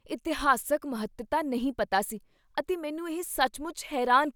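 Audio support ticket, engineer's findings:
No audible faults found on listening review.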